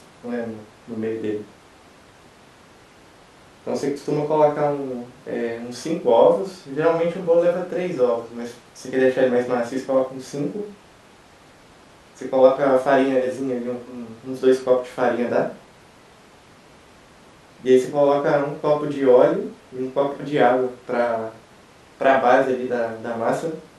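Listening to this speech recording, nothing technical stood out.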